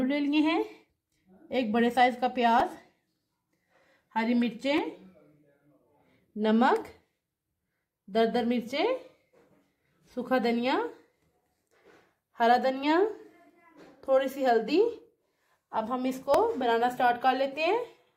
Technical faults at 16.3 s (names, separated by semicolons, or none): repeated buffer